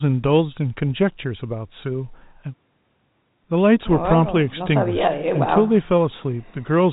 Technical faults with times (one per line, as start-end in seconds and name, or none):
none